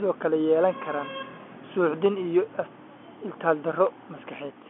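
No technical faults are audible.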